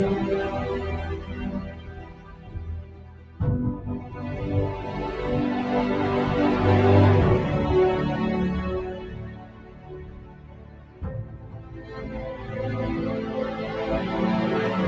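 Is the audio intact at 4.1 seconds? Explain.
No. Between 4.01 and 4.19 s the sound is cut by the noise suppressor: for roughly a fifth of a second the suppressor judged this passage to be noise and pulled it down by up to about 5 dB. It is a gain reduction, not a dropout. The sound stays audible, only sunk and thinned, with its sustained or decaying part losing most. Unlike a packet loss or a gap, there is no hard silence, click or repeated fragment.

This dip happens because a noise suppressor designed for speech is running on the whole clip, which is not speech. It treats steady tones, ambience and reverb tails as noise and keeps changing how much it removes, with losses swinging by around 15 dB. Onsets pass while sustained material sinks, so the level pumps and flutters. That constant, content-dependent breathing separates it from a one-off level drop or a gain fault. The missing content above 8 kHz comes from the call's normal microphone processing.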